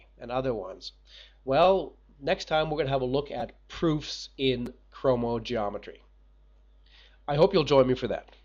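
At 1.64 s, 3.40 s and 4.66 s a repeated buffer occurs. New audio arrived late, so a piece of about 5.3 ms, which fits a 256-sample buffer, replays two, three and two extra times with hard joins, heard as a brief click or buzz. Essentially no audio is lost.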